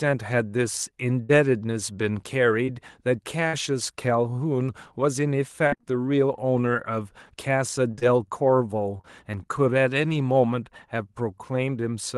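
At 1.23 to 1.31 s the speech turns briefly into a held, fading buzz or hiss, then jumps ahead. The same thing happens again at 3.47 to 3.55 s. Each is a burst of packet loss. Roughly 60 ms of audio never arrived in time, so the receiver stretched the last sound for about 56 ms, lowering its level as it went, and then picked up the stream further on. The audio in between is simply gone.

At 2.65 to 2.69 s there is a quick smear or wobble rather than a clear gap. This is short concealed packet loss. About 20 ms went missing, and the decoder covered it with roughly 23 ms of extrapolated sound built from the preceding pitch or noise, then blended back into the real audio. A brief consonant in that spot may drop out.

From 5.67 to 5.85 s the sound goes choppy. This is repeated packet loss (robotic sound), with four dropouts close together in under two tenths of a second. The longest is about 53 ms, and in total about 120 ms is lost and 100 ms patched, so more than half of that stretch is synthetic continuation. 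A milder version runs from 7.91 to 9.05 s. There, five short holes of up to 23 ms each are spread across more than a second, so the roughness comes in brief flickers rather than a steady robotic tone.

Throughout, the Opus call path limits the top end to about 12 kHz.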